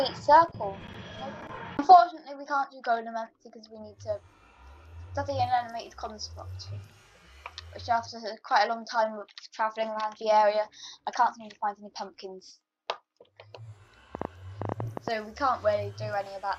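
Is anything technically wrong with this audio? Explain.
Yes. From 14.15 to 15.09 s there is a train of clicks: about ten sharp, similar pulses at roughly 9.7 per second, irregularly spaced and peaking well above the sound. They are heard as uneven ticking, most likely from electrical interference or a faulty connection or power supply.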